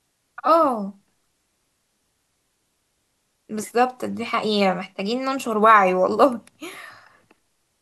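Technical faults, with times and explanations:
The speech signal is continuous and steady, with no dropouts, level jumps or added disturbances at any point.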